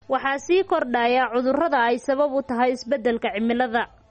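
From start to end the speech has a watery, swirling quality with plainly audible damage, and nothing survives above 8.4 kHz, so the top is dull and the s sounds are thin and chirpy. This is likely MP3 compression at a low rate, one that fits about 32 kbps. Short of bits, the encoder drops weak frequency lines that blink on and off between frames, and it cuts off everything above a fixed treble limit.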